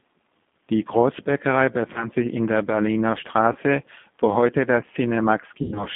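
Throughout, the speech sounds narrow, rough and slightly synthetic, confined to roughly 200 Hz to 3.5 kHz, with plainly audible coding damage. This is the G.729 codec, which fits an 8 kbit/s G.729A line: it rebuilds speech from a vocal tract filter, pitch predictor and sparse pulses.

At 1.93 to 2.08 s, just before "sich in der", the sound smears into a brief buzzy tone or coloured noise that fades, and stays weak afterwards. It recurs at 3.53 to 3.56 s, and more severely from 5.62 to 5.86 s. This is VoIP packet loss concealed by the speech codec. About 20 ms went missing at each of the first two points, and about 120 ms was lost across 140 ms in the last, with a 100 ms run. The decoder extrapolated from its last pitch and filter and lowered the gain, and because each frame builds on the one before, the distortion persists past the gap.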